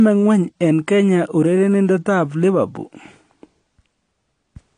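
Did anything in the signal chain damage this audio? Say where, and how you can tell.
Yes, at the codec stage. This is likely low-bitrate audio saved at a high bitrate: an earlier low-rate encode stripped the content, and re-encoding at a generous rate cannot restore it. Throughout the speech, nothing sounds above 9.8 kHz, and the dull top end and the first encode's artefacts persist.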